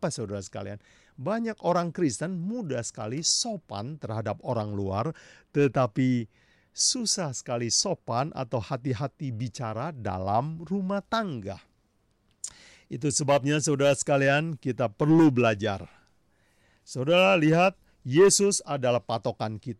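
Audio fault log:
No audible faults detected in the speech recording.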